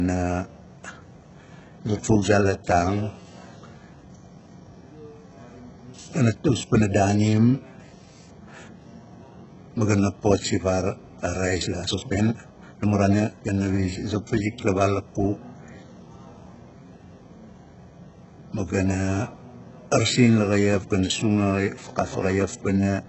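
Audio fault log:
throughout, HE-AAC compression: gritty, lispy treble with nothing above 8 kHz, likely from replicated upper bands at a starved bitrate, around 8 kbps.
11.58–13.50 s, time-stretched section: speech suddenly runs about 1.6 times faster at unchanged pitch, sounding rushed, likely from short pieces being dropped to squeeze it.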